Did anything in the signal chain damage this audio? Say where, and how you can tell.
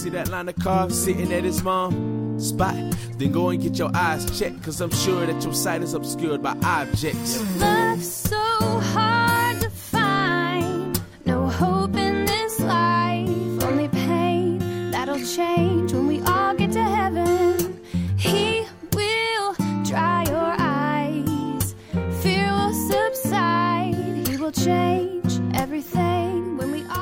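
No, nothing along the chain seems to have touched this audio; it comes across steady and whole, with no stage leaving a mark worth pointing to.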